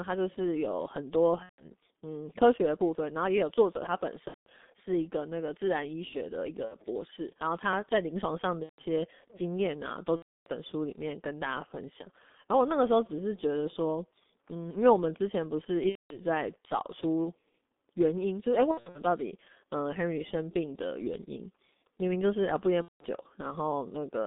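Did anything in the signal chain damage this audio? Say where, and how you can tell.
Yes. G.723.1 codec damage runs through the whole clip, at the codec stage. The speech is confined to roughly 200 Hz to 3.6 kHz, muffled and hoarse, with smeared consonants. That heavy coloration fits a coder running near 6.3 kbit/s. It codes in 30 ms blocks and updates its vocal-tract model only slowly, so fast spectral changes in consonants get averaged away and the upper band is simply discarded.

VoIP packet loss concealed by the speech codec, at the network stage, occurs at 1.43 s (150 ms), 4.28 s (180 ms), 6.65 s (60 ms), 8.63 s (150 ms), 10.16 s (300 ms), 15.89 s (210 ms), 18.71 s and 22.82 s (180 ms). At 18.71 s the gaps are scattered across 240 ms, none longer than 60 ms. At each point the speech smears into a stretched, fading sound as the decoder repeats its last pitch and filter at falling gain, and it stays weak briefly after packets resume.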